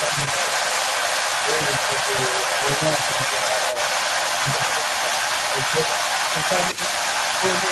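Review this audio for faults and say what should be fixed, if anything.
Other side's voice leaking through runs the whole clip, 0 to 7.7 s, roughly 5 dB above the talker, likely loudspeaker echo that the echo canceller failed to remove from the microphone.

Speech suppressed in double talk at 0.05–0.52, 1.43–2.13, 2.48–3.72 and 6.74–6.81 s: the talker dips by a few decibels, likely because the canceller turned everything down during overlaps.

Use a headset, or retune the echo canceller so it adapts fully to the loudspeaker path and stops attenuating the near talker during double talk.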